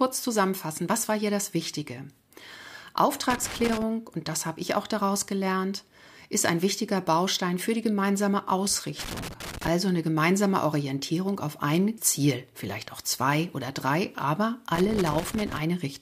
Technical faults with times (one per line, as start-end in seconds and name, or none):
3.30-3.83 loose connector crackle
8.99-9.68 loose connector crackle
14.75-15.62 loose connector crackle